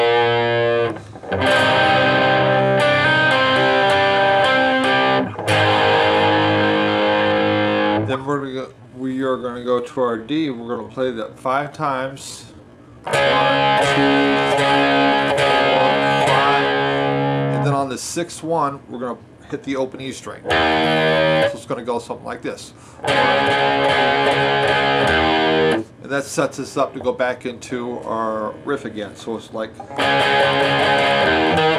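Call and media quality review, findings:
Time-stretched section, 6.36–16.26 s: pace abruptly slows to about 0.67x, pitch unchanged. Likely a time-stretch algorithm repeating short grains to pad length. Spectrogram shows elongated events, same harmonic spacing; waveform shows stretched envelopes.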